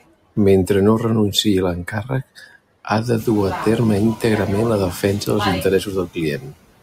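The noise suppressor works frame by frame for the whole clip, turning down each band it judges to be steady background, so noise artifacts run throughout. The leftover noise sinks in the gaps and swells under the speech, most audible once the room noise rises by about 22 dB around 3 s. Speech is cut by the noise suppressor at 0.01–0.37 s, 1.85–2.56 s, 6.06–6.18 s and 6.38–6.57 s, with drops of about 16 to 21 dB, so brief stretches of speech sound swallowed and faint.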